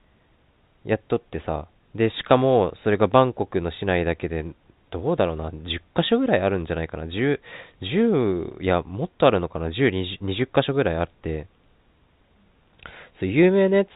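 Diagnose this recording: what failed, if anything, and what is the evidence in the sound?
Nothing failed in this recording; the evidence in the sound is only the narrow band of a normally working G.711 telephone line.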